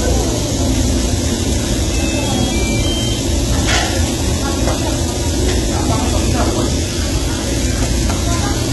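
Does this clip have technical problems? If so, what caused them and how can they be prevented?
Yes. Throughout the audio there is heavy HE-AAC compression damage, and the sound likely passed through HE-AAC at a very low bitrate, which fits about 16 kbps. The codec kept only the lower spectrum and rebuilt the treble by copying lower bands upward, so the top sounds gritty and metallic and stops completely at 11.8 kHz. Unlike plain low-pass filtering, this treble is present but synthetic and out of step with the harmonics below it. Encoding at a higher bitrate, or with a codec that codes the full band, would prevent it.

From 5.29 to 7.72 s there is a train of clicks: roughly ten similar pulses at about 4.1 per second, unevenly spaced, peaking at roughly the level of the sound itself. This was likely interference, for example from nearby equipment, or a faulty connection or power supply injecting repeated pulses. 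Because the clicks share one shape and keep coming even through pauses, they differ from the random crackle of dropped samples or damaged media. Securing cables, isolating the power supply and keeping noisy equipment away would prevent it.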